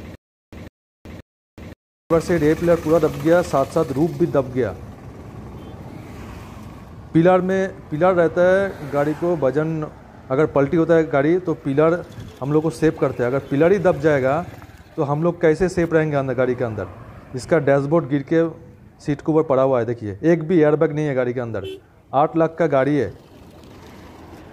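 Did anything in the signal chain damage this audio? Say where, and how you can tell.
Yes, at playback: a stutter with silent gaps from 0 to 2.10 s. A 0.15 s burst repeats every 0.53 s, likely from a stalled buffer replaying its last fragment.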